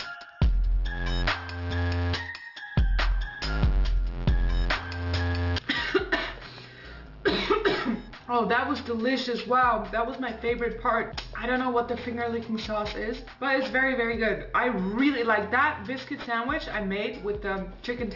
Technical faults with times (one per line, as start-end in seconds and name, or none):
0.00-18.16 aliasing